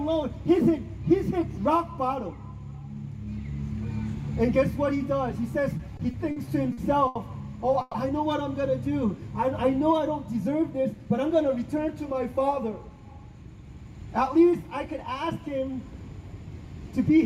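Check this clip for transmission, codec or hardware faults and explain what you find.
There are three transmission faults here, all from network timing rather than the codec or hardware.

From 5.77 to 7.18 s you get repeated stalls (stutter): six short gaps, the longest 80 ms, adding up to 240 ms. Packets arrived late, so the jitter buffer kept running dry and the receiver stretched the last sound to bridge each gap. Nothing's lost, but about 17% of that stretch is filler, so it drags and hiccups.

At 7.81 to 7.97 s there's a call audio freeze: the sound hangs for 130 ms as a continued, smeared tail rather than silence, then picks up where it left off. Likely a delayed packet burst emptied the buffer, pushing playback 130 ms later.

Between 10.62 and 11.63 s there's a jitter buffer speed-up. With too much audio queued, the receiver trimmed tiny pitch-period slices, about a tenth of a second in total, so the sound runs at roughly 109% speed with unchanged pitch and feels a bit rushed.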